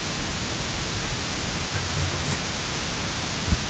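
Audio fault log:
Throughout, echo leak: a delayed copy of the speech follows the direct sound by about 301 ms and sits around 10 dB below it. This is likely an echo canceller on a loudspeaker end letting part of its microphone pickup through and returning it.
0.68 s onward, speech suppressed in double talk: where the returned copy overlaps the talker, the direct speech dips and pulls back, by around 10 dB at its deepest. This is likely the echo canceller failing to separate talker from echo and turning both down together.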